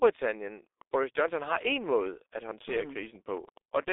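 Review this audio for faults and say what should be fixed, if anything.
The speech went through a G.723.1 codec at 6.3 kbit/s. That keeps only a 300 Hz to 3.7 kHz band and models the voice coarsely over long frames, so the whole clip sounds muffled and hoarse, with smeared, indistinct consonants. Route the call over a wideband codec at a higher bitrate so the upper frequencies and consonant detail survive.

A train of clicks runs from 0.82 s to the end, likely caused by electrical interference or a faulty connection or power supply injecting pulses. Around thirty similar ticks arrive at an uneven pace, about 9 per second, roughly as loud as the speech and audible in the pauses too. Shield and separate the cabling from nearby equipment and check the interface's connection and driver so no stray pulses reach the signal.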